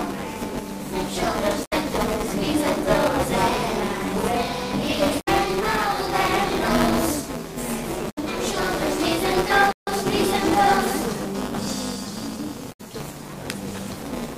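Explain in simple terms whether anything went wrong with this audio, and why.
Throughout the clip there is buffer tearing: a steady robotic buzz at about 200 Hz, because a small slice of each buffer replays audio from roughly 10 ms earlier.

Damaged data in a compressed stream causes short glitches at 1.61–1.73 s, 5.16–5.28 s, 8.06–8.18 s and 12.68–12.81 s, as the decoder loses its place and resyncs.

A playback stall silences the sound for about 154 ms at 9.71–9.87 s, likely because the player briefly ran out of data.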